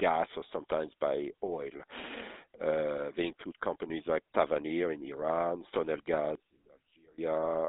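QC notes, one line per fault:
Throughout: GSM full-rate codec. The speech is confined to a narrow phone band of roughly 250 Hz to 3.7 kHz, with nothing above 3.8 kHz, and carries a plainly audible buzzy, gravelly roughness. This comes from the codec rebuilding the voice from a coarse, pulse-driven excitation, consistent with a 13 kbps GSM link.
6.35–7.18 s: one channel inverted. The level drops by about 25 dB and the speech turns faint for this stretch before returning. The likely cause is one channel reversing polarity, so the centred content cancels when the channels are summed to mono.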